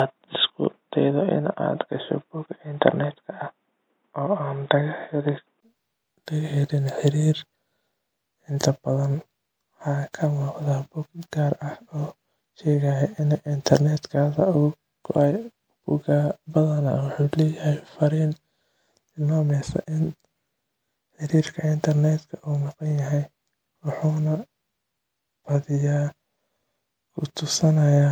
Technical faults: generation loss; input switched to a poorer device

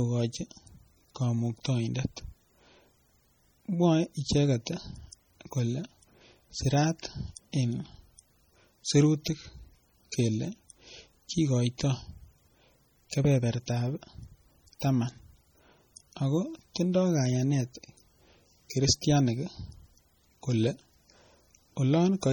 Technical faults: MP3 compression; pre-echo

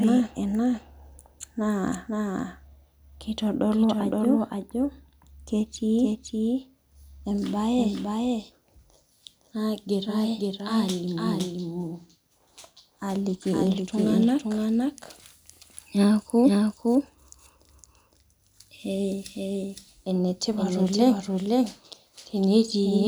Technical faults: doubled audio track

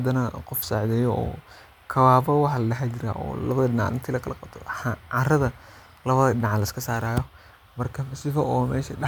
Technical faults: none

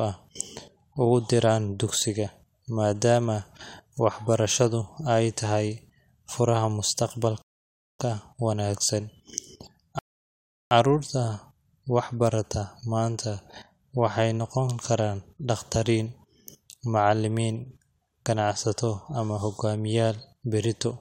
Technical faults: rebuffering stall

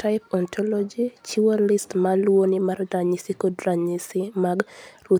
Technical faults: none

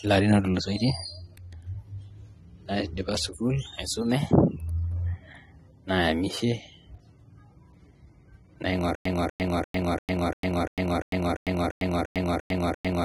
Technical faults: AAC compression; drift correction step; stutter with silent gaps

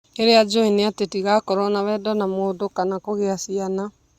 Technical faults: none

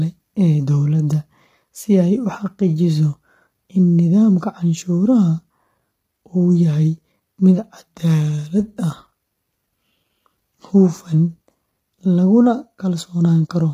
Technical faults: low-delay AAC compression; dropped samples

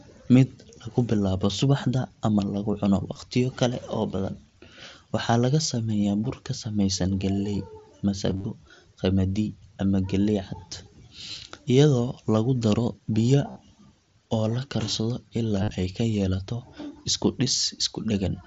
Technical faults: concealed Bluetooth headset packet loss

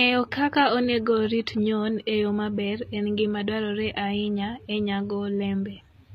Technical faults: HE-AAC compression

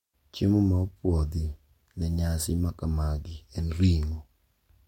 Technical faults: none

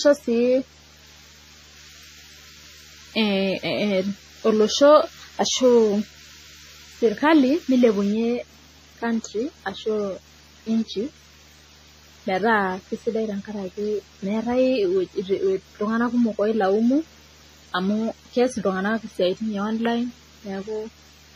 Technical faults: video or display buzz; WMA compression

